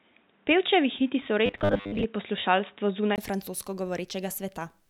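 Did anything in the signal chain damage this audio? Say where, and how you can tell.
Yes. From 0.0 to 3.18 s the band is narrower and the level sits about 5 dB different, with a 20 ms gap at 3.18 s; likely an input switched to a poorer device.

Between 1.46 and 2.05 s the speech takes on a rigid 100 Hz buzz, robotic sound from repeated short buffers, likely a driver stage looping 10 ms blocks over roughly half the audio.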